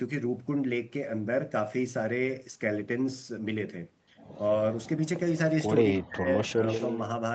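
From 4.85 to 4.9 s a brief echo leak appears: a faint copy of the speech arriving 250 ms late, likely from a loudspeaker echo the far end's canceller did not fully remove. From 5.95 to 6.28 s the speech is suppressed in double talk, dropping very deeply for about a third of a second. A milder dip follows from 6.48 to 6.63 s, likely because the echo canceller turned the talker down while the other side spoke. From 6.67 to 7.0 s the echo leak returns much stronger, with the 250 ms delayed copy only about 10 dB below the speech.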